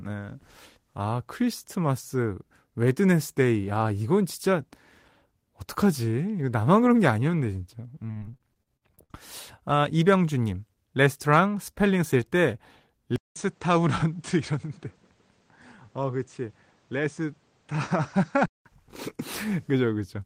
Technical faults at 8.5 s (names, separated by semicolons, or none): repeated packet loss (robotic sound)